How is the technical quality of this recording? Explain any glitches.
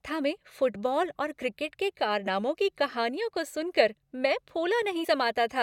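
The recording has two skipped-audio glitches. Compressed frames skipped at 2.26 s, between "फुटबॉल और क्रिकेट के" and "की कहानियों को सुनकर", and at 5.03 to 5.05 s: roughly one and then two 21.3 ms frames never play, so the speech jumps ahead about 20 and 40 ms.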